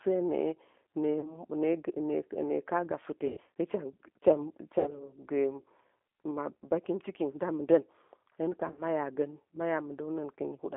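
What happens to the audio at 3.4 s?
At 3.4 s the sound is just leaving a dropout running from 3.27 to 3.40 s, about 100 ms of missing packets covered by the speech codec's packet loss concealment. The decoder repeated its last pitch and vocal tract filter with shrinking gain, so the sound smears into a fading buzzy tone or coloured noise. Because each frame is predicted from the one before, it stays weak and distorted for a short while after 3.40 s. The gap fits roughly ten lost 10 ms frames. Throughout, the G.729 codec at 8 kbit/s limits the band to about 250 Hz to 3.5 kHz and rebuilds speech from a pitch predictor and a few pulses per frame, giving a plainly rough, synthetic texture.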